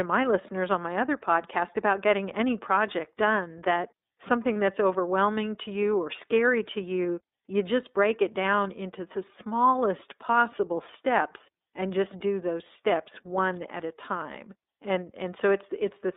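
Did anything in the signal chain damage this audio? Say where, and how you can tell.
Yes. At the codec stage, the whole recording has passed through the iLBC codec, a narrowband VoIP coder that handles each 30 ms frame independently. The line is confined to roughly 250 Hz to 3.7 kHz, so nothing above that reaches the ear. The speech carries a plainly audible rough, synthetic edge from the coarse excitation coding, and the overall character fits iLBC's 13.33 kbps mode.

On the network side, there are lost iLBC frames at 4.53 to 4.56 s. The gap is about 30 ms, which points to a single dropped frame. The decoder filled the hole by repeating the last pitch cycle with added noise, so the moment sounds like a brief held, faintly buzzy vowel. Because each iLBC frame decodes without relying on the previous one, the sound recovers immediately afterward.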